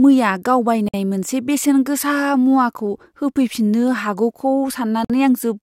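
At 0.88 s, just after "मैया गाव", the speech drops out for about 54 ms, and at 5.05 s a second dropout of about 52 ms follows. Both are a gap at a join of encoded pieces, where separately encoded segments were butted together with the encoder's start delay and end padding left in. Each sounds like a brief hiccup before the speech resumes mid-flow. On a waveform it shows as a flat stretch with softened edges; a spectrogram shows a clean vertical blank band, slightly smeared at its borders.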